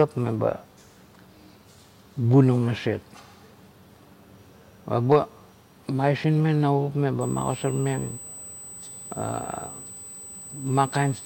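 From 7.21 s to the end of the speech, a USB whine sits at a fixed 8 kHz, about 20 dB below the voice. It is current from the bus's 125-microsecond microframes leaking through power or ground. On a spectrogram it is an unbroken horizontal line at 8 kHz.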